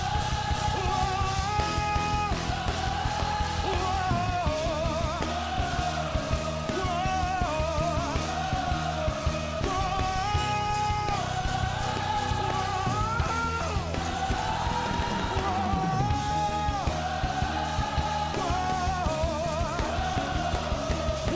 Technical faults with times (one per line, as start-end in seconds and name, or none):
none